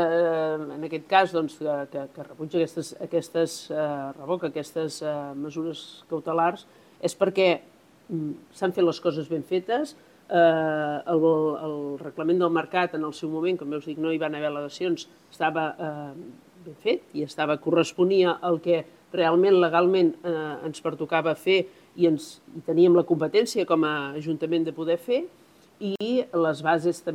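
At 25.96 to 26.01 s there is a gap at a join of encoded pieces. The audio drops out for about 50 ms, then resumes where it stopped. Separately encoded segments were joined untrimmed, leaving encoder start delay and final-frame padding. Codec smearing softens the gap's edges.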